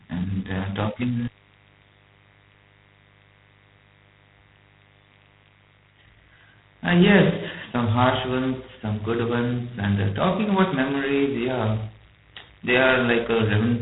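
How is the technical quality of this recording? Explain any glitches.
Technical quality is poor: two faults run through the whole recording.

Mains buzz is present throughout. Sharp spikes from a 50 Hz supply leak in twice per cycle, giving a steady, raspy buzz roughly 35 dB below the speech. On a spectrogram it shows as evenly spaced horizontal lines at multiples of 50 Hz, reaching well up the band.

G.726 ADPCM coding is also present throughout. Each sample is coded as a coarse difference from a predicted value, and the damage is heavy, which fits the 16 kbit/s rate. It produces a harsh, rasping hiss that rises and falls with the speech. A spectrogram shows a hard ceiling near 3.9 kHz, with grainy noise filling the band beneath it.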